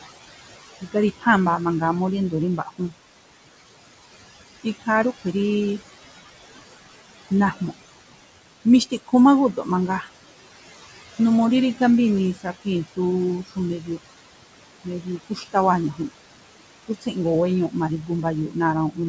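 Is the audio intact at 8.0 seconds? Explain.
No. At 8.0 s, as across the whole clip, noise suppressor artifacts are present: the suppressor pulls the room noise down by about 17 dB in gaps and lets it back under the speech, so the residue pumps.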